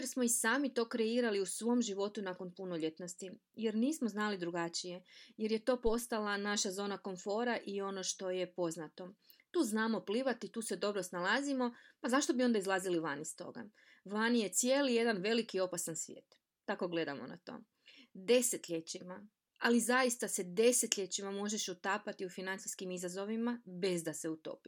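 A phantom power thump hits this speech recording at 5.87 to 5.97 s: a supply switched on or off on the live input, and the voltage step rode through the coupling capacitors. It comes out as a deep thump peaking at about -29 dBFS, dying away within roughly 23 ms.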